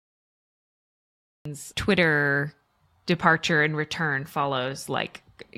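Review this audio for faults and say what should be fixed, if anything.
The speech opens with digital silence until 1.45 s, then jumps in mid-sound with no natural onset. This is a cut-off start: capture began after the talker was already speaking. Start recording earlier, or keep a short pre-roll buffer running.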